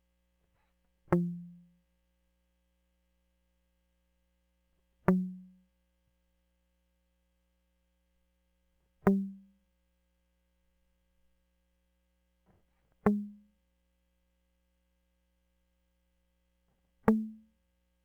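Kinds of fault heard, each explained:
Sample clock jitter: the converter's timing wobbles by several microseconds, around 7 µs, so each sample lands slightly off its proper instant. The resulting error is largest where the waveform changes fastest, so this music carries a fine hiss and roughness that swells on loud, bright passages and drops away in quiet ones, sitting roughly 35 dB below the signal. A spectrogram shows a faint broadband haze that tracks the music's high-frequency energy. The waveform looks normal.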